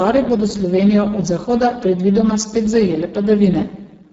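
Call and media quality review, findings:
Speex codec at a very low quality setting, whole clip. Excitation starved of bits, which fits a bitrate near 6 kbps. Symptom: speech heavily damaged, noisy, hoarse, edging toward robotic throughout. The band above 4 kHz is only a shaped noise-like fill, and nothing reaches above 7.7 kHz.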